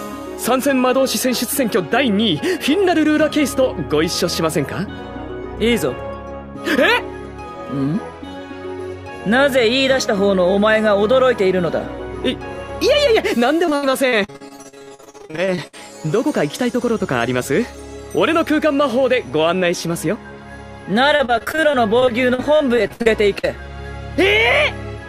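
At 13.31 s there is a repeated buffer: fresh audio missed its deadline, so the device played the last short block twice more. The repeats, which fit a buffer of about 5 ms, produce a brief click-like buzz and skip roughly 10 ms of audio.

From 13.65 to 15.76 s, and again from 21.16 to 23.45 s, repeated packet loss gives a choppy, robotic sound. Frequent holes are patched by extending the preceding sound, up to 73 ms and 61 ms at the longest, covering about 39% and 21% of those spans.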